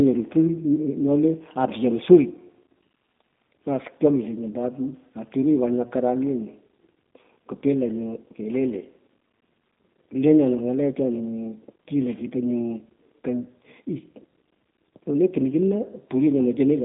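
It's a speech clip run through the G.729 codec for its whole length, and you can plainly hear it. Nothing gets through above about 3.7 kHz, the lows are thin below 200 Hz, and the voice is rebuilt from a filter plus sparse pulses, which fits an 8 kbit/s stream and sounds rough and synthetic.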